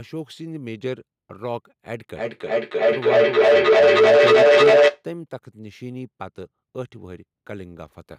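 From 2.15 s to 5.07 s a feedback howl builds as a shared-room microphone-to-loudspeaker loop adds gain each pass, narrowing to a tone near 500 Hz that pulses roughly every 300 ms, peaking about 15 dB above the speech: a bright horizontal line on a spectrogram, swelling waveform envelope.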